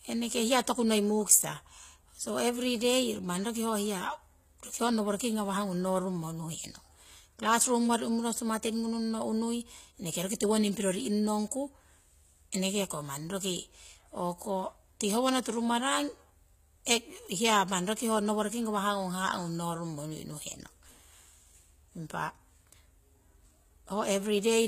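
Speech in which the treble sounds gritty and metallic, with sibilants turning lispy and nothing above 14.9 kHz. This likely comes from HE-AAC compression at a low bitrate, around 20 kbps, rebuilding the highs by copying lower bands upward. At 16.85 s a brief hiss of about 17 ms smears ahead of a sharp attack. This is pre-echo: the codec spread quantisation noise across its block, into the quiet moment just before the attack.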